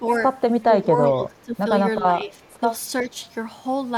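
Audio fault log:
0.00–0.17 s, 0.62–1.69 s, 2.04–2.33 s, 3.10–3.17 s, speech suppressed in double talk: the speech level drops by up to about 10, 15, 5 and 10 dB respectively. The likely cause is an echo canceller mistaking this talker for loudspeaker echo while the far side played. The waveform envelope shows sunken notches, and the spectrogram shows energy darkening across the bands during each dip.
2.99–3.03 s, echo leak: a short delayed copy of one voice comes back about 376 ms after the original, at about 25 dB below the speech. This is likely residue that the loudspeaker side's echo canceller did not remove. On a spectrogram, a repeat of the earlier harmonic pattern appears, offset in time.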